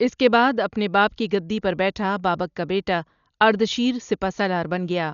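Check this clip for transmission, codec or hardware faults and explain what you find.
Throughout this speech clip there is heavy codec damage, likely from Dolby Digital compression at a low rate, around 48 kbps. Nothing is present above 7 kHz, so the audio sounds dull. Many frequency lines were left without mantissa bits and refilled with dither noise, which leaves a rough, fluttering haze around tonal parts.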